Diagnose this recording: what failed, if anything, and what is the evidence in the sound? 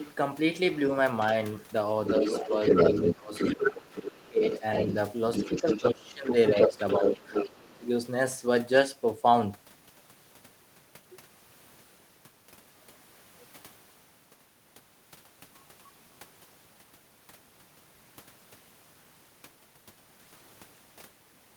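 Call processing, in the echo canceller: the other side's voice is leaking through. A faint scrap, roughly 25 dB down, appears at 1.2 s, then a second voice at about speech level runs 2.06–4.93 s and 5.32–7.58 s. Unlike mixed-in background noise, this is a distinct voice, most likely loudspeaker echo left uncancelled.

Also call processing: speech suppressed in double talk. The talker dips at 2.19–2.53 s (shallow, around 5 dB), 3.14–4.43 s (up to roughly 20 dB), 5.61–7.19 s (around 15 dB) and 7.56–7.87 s (roughly 25 dB). These are not network dropouts: every dip overlaps the leaked-voice stretches, likely the canceller ducking both voices at once.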